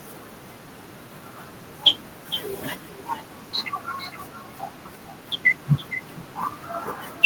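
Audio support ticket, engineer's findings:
Echo with no canceller, whole clip: speech shadowed about half a second later by a thinner copy around 15 dB down. Far-end speaker bleeding into its mic, nothing removing it.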